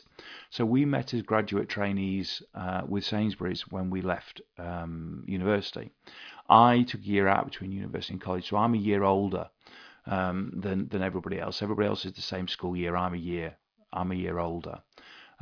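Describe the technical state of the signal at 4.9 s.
At 4.9 s the speech signal is intact, with no audible fault at that moment.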